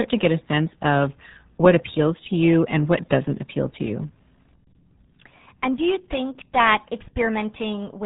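RealAudio 14.4 codec damage runs through the whole speech clip: nothing above about 3.8 kHz survives, and the heavy low-rate coding, which fits an 8 kbit/s RealAudio 1 stream, leaves the voice muffled and gargly, with a smeared, bubbling texture from start to finish.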